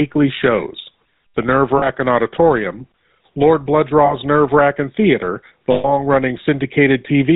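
Speech coded with the GSM full-rate codec, whose pulse-driven vocal-tract model keeps only a third of the excitation and passes nothing above 4 kHz, so the whole clip sounds band-limited, buzzy and gravelly, which fits the 13 kbps full-rate coder. Lost GSM frames occur at 1.78–1.89 s, 4.06–4.14 s and 5.72–5.88 s. The decoder repeats the last good frame, leaving a rough metallic ring, brief for the 40 ms gaps and longer for the 120 ms one.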